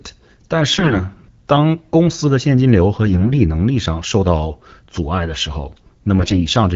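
A speech clip carried over AMR wideband (HD Voice), with a clarity that fits a rate around 12.65 kbit/s. It has three short bursts of AMR bit errors at 0.69–0.97 s, 3.06–3.40 s and 6.20–6.45 s. In each burst, flipped bits in the weakly protected part of the frames misplace the excitation pulses and skew the finer pitch, gain and spectral values. The voice turns hoarse and gargly while keeping its pitch and loudness. Unlike frame loss, nothing drops out or gets smoothed over.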